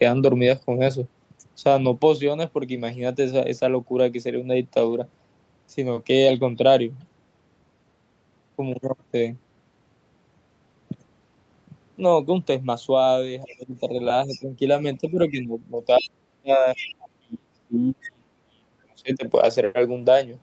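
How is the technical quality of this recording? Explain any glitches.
The recording is speech carried over a call link, band-limited to about 8 kHz by the Opus codec path. It has three kinds of glitch, clustered in the second half.

Lost packet rebuilt from error correction: from 4.81 to 4.95 s, about 80 ms of the sound turns rough and grainy without any actual gap. Single brief patches recur at 13.71 s and 19.49 s. The pattern fits lost packets, roughly four at first and then one each time. The following packets carried low-bitrate backup copies, and the decoder played those coarser copies in place of the originals.

Speech suppressed in double talk: between 13.45 and 14.55 s, the voice dips by around 15 dB, for roughly half a second in total. Between 15.01 and 19.24 s, it sinks much deeper, around 35 dB, for roughly three seconds altogether. The likely cause is both parties speaking at once. 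The echo canceller then could not tell the local talker from the loudspeaker echo and attenuated everything.

Other side's voice leaking through: faint scraps of a second voice appear at 13.48, 14.28, 15.98 and 16.76 s, each lasting between about 0.1 and 0.16 s. The first sits around 25 dB below the main speech, the second about 20 dB below, and the last two are louder, about 15 dB below. These are likely remnants of the far side played from the talker's loudspeaker that the echo canceller failed to fully remove from the microphone signal.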